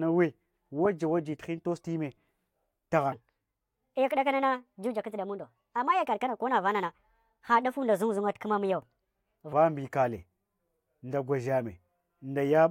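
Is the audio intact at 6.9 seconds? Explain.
No. A likely playback clock mismatch causes a section at the wrong speed from 3.12 to 9.53 s, running 1.32 times fast, so speech sounds hurried and about five semitones higher.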